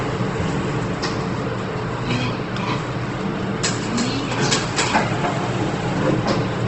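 From start to finish the audio carries Opus compression damage, plainly audible, with nothing above 8.3 kHz, so the top end is sealed off evenly. Tonal parts sound rough and grainy, as if a fine noise were woven into them, which is likely the codec filling starved bands with folded or noise content at a rate near 16 kbps. Unlike MP3 damage, there is little swirling or warbling and few hollow gaps in the spectrum.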